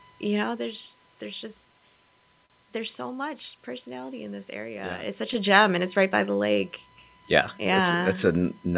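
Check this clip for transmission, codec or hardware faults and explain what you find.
Four faults stand out: a steady hardware whine, a clock mismatch between the two ends, the timing corrections that mismatch causes, and one brief stall.

USB whine, throughout: a fixed 1 kHz tone about 35 dB below the speech, caused by the USB bus's 1 ms frame activity leaking into the audio through power or ground.

Clock drift between sender and receiver, throughout: the sender's clock runs roughly 3% slow, so the receiver's jitter buffer keeps draining and must be padded to stay in step.

Repeated timing corrections, from 0.63 s (just after "you know") to 8.44 s: the receiver stretches the sound to 98% speed, adding roughly 150 ms in total.

Short stall from a late packet, 2.46 to 2.52 s: a packet arrived late, so the receiver held the last sound for 39 ms until it came. Nothing is lost, but that sound is briefly prolonged.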